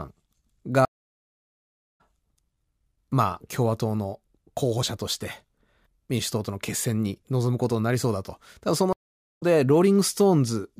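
At 0.85 s the speech drops out for 1.13 s in a stream reconnect: the connection broke, the player sat silent, then restarted decoding mid-stream, resuming at 2.01 s roughly 0.7 s further on, so a stretch of speech is skipped. The waveform shows a flat gap, and the spectrogram a fully empty band, with a fade-in at the restart. A shorter reconnect runs from 8.93 to 9.43 s, with 0.47 s of silence, picking up about 0.4 s later.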